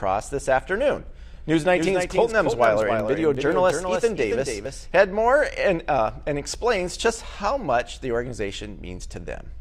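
From 1.34 to 5.02 s, a doubled audio track likely comes from a second, slower capture path. A full-band copy trails by around 300 ms, about 5 dB quieter, and starts and stops abruptly.

Between 2.64 and 3.87 s, CD scratch ticks appear where disc damage exceeds error correction on each rotation. The resulting eight brief, evenly spaced ticks are of uneven strength, the longest about 1.5 ms.

At 4.65 s, an overlap between stream segments shows up as timestamps colliding at a boundary, consistent with 6-second segments. The trimmed sound causes a waveform jump heard as a tiny skip.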